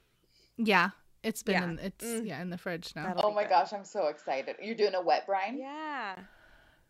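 At 3.21 s the speech drops out for 20 ms, then returns duller and quieter, with nothing above 7.6 kHz and a faint new noise floor well beneath it. That's likely the input switching to a poorer device, and it lasts until 6.17 s.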